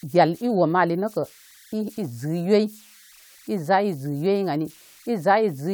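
Throughout the speech runs a faint whistle around 2 kHz, sitting about 30 dB below the signal: converter idle tones. With no dither, the delta-sigma converter settles into repeating bit patterns whenever its input is small, and those cycles form a tone set by the input's offset. It shows in pauses as a thin chirp and under quiet passages as grainy hiss. A spectrogram would show a narrow horizontal line near 2 kHz.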